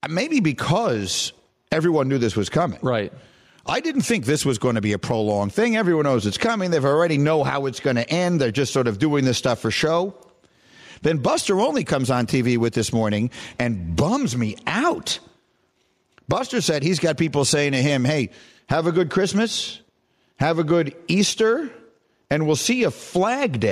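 Input gain set far too high for the microphone, with a fast limiter or compressor clamping down on every loud syllable, is the likely cause of the gain pumping that runs throughout this speech. The gain swings by roughly 15 dB, leaving the levels squashed.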